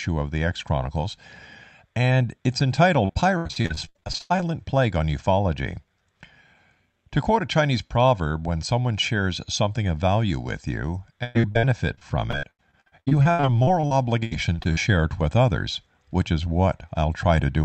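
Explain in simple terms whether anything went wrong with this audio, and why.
Repeated packet loss (robotic sound) hits twice: 3.05 to 4.51 s, after "and it's", and 11.23 to 14.79 s, between "of value with you" and "it with others which". Many small chunks of sound went missing in quick succession, each patched by stretching the last bit. Unlike a single dropout, it sounds choppy.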